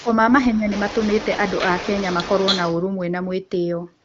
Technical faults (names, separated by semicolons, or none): speech suppressed in double talk; echo leak